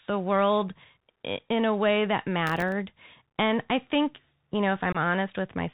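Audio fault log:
throughout: Bluetooth CVSD headset codec. The speech is carried as a one-bit up-or-down stream at 64 kbps, so nothing above 4 kHz survives; sibilants come out scratchy, loud high-frequency energy outruns the adaptive step and distorts, and a granular hiss sits under the voice.
2.47–2.72 s: processor overload crackle. Just after "in a way that", a quarter-second burst of gritty tearing rides on the speech. It fits roughly fifteen missed deadlines on buffers of under a millisecond each, every miss leaving a hard-edged silent gap.
4.92 s: unconcealed Bluetooth headset packet loss. Right after "I think you know", a 22.5 ms hole drops out of the speech with abrupt edges. Its length points to about three lost voice packets, and the voice returns momentarily quieter.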